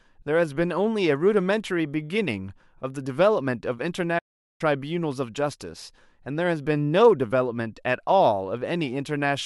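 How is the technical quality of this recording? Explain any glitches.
The recording has one clear glitch, a playback stall. At 4.18 s the speech cuts out abruptly in mid-flow. The output stays silent until 4.61 s, a gap of about 410 ms. Then the sound returns. The cause is likely the player running short of buffered data or its audio thread being blocked for a moment. Nothing reaches the output during that time. The result is a sudden hole in the speech, not a fade or a click.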